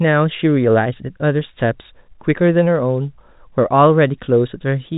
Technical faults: none

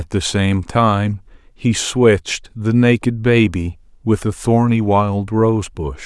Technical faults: none

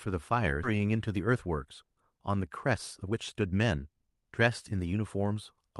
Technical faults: skip ahead; jitter buffer speed-up

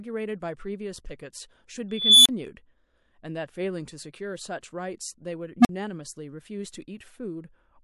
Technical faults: pre-echo; unstable filter

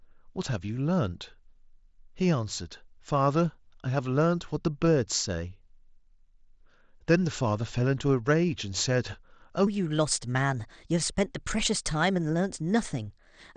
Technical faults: section at the wrong speed

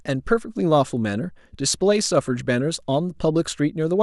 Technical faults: none

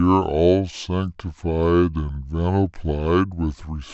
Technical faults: wrong sample rate

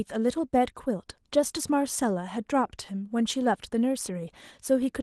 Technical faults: none

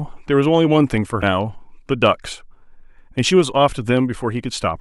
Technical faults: damaged data in a compressed stream

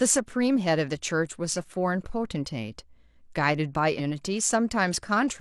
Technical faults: stream segment skipped

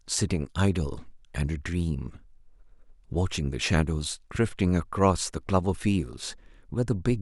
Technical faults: loud pop

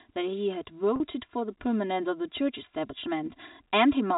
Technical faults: channel delay (comb filtering); automatic gain rising; packet loss with pitch repetition

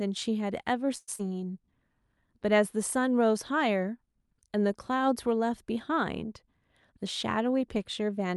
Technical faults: call audio freeze; short concealed packet loss; jitter buffer speed-up

